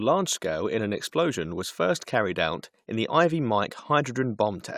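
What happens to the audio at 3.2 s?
Nothing goes wrong at 3.2 s; the speech there is intact, with no dropout, click, distortion or other fault.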